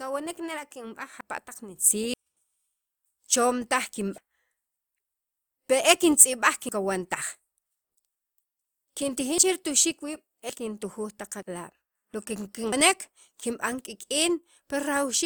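Samples were likely overwritten before being read, giving dropped buffers (overruns) at 1.21, 2.14, 4.18, 6.69, 9.38, 10.50, 11.42 and 12.73 s. Each is heard as a jump where the speech skips ahead, losing about a tenth of a second, or nearly a third at 2.14, 4.18 and 12.73 s.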